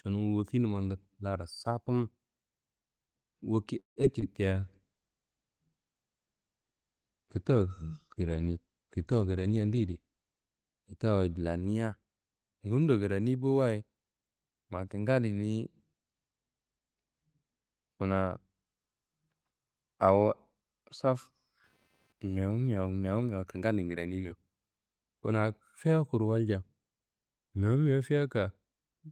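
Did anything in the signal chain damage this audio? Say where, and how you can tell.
Yes. A call audio freeze, in the network and jitter-buffer stage, runs from 3.79 to 3.98 s. The sound stops, with about 130 ms fully silent, then resumes where it left off, adding 167 ms of delay and losing nothing. The likely cause is packets held up in transit while the buffer ran dry.

Short concealed packet loss, from the network, follows at 4.02 to 4.05 s and 4.21 to 4.24 s. These are brief smears where 20 ms and then 40 ms of audio never arrived. The decoder bridged each gap by extending the preceding sound and crossfading back.

A jitter buffer slow-down, in call processing, runs from 4.48 to 4.66 s. Playback drops to 81% speed at unchanged pitch. Repeated pitch periods add 42 ms, which is audible as stretched sound while the buffer rebuilt its reserve.

A call bitrate drop, at the codec, runs from 4.56 to 10.49 s. 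The audio turns coarse and duller as Opus falls from its normal 32 kbps to 13 kbps. The encoder followed a collapsed bandwidth estimate, coding with fewer bits and trimming the high end until recovery.

A jitter buffer speed-up, in call processing, runs from 9.14 to 10.63 s. The sound hurries at 110% speed with pitch intact. The receiver cut pitch-period slices, roughly 150 ms in total, to drain excess buffered audio and reduce delay.

Computer activity noise, in the analogue wiring, appears from 21.03 to 23.6 s. It is a faint buzzy chirping with a pulse rate of around 200 Hz, about 45 dB below the signal, and it is unrelated to the audio content. Processor or peripheral load currents modulated the shared ground.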